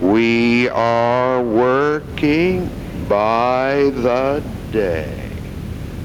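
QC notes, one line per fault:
Throughout: gain pumping. The gain swings around 15 dB, so dynamics sound squashed. This is likely excessive input gain hitting a fast limiter. The waveform shows a flattened envelope.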